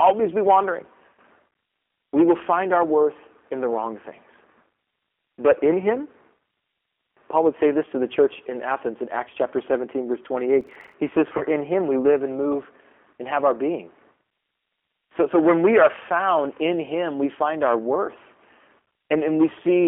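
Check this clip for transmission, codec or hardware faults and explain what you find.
Three faults here: a codec running the whole way through, plus two short glitches close together just past the 10-second mark.

The first is the G.729 codec, and it's plainly audible. The sound is confined to a telephone band of roughly 250 Hz to 3.4 kHz, which fits 8 kbit/s G.729A. That codec doesn't carry the waveform itself. It sends a vocal-tract filter, a pitch predictor and a few pulses per frame, and the decoder rebuilds speech from those. So everything has a slightly rough, synthetic edge and the top end is gone.

From 10.61 to 10.94 s there's a processor overload crackle. The machine fell behind and missed a run of tiny buffer deadlines, a dozen or more of them, each only a few milliseconds long, which fits buffers of around 3 ms. Each missed buffer came out as silence with hard edges. Packed that closely, the gaps become a gritty tearing that sits on top of the speech for about a third of a second and then stops.

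At 11.38 to 11.43 s there's a VoIP packet loss concealed by the speech codec. About 30 ms of audio went missing, which points to a single lost packet. Instead of leaving a hole, the decoder carried on from its last pitch and filter settings and turned the gain down as it went. You hear a brief stretched buzz or coloured noise that fades out rather than a clean dropout.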